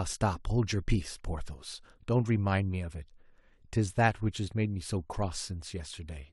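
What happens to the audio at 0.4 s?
Nothing goes wrong at 0.4 s; the speech carries on intact through that moment with no dropout, click, distortion or other fault.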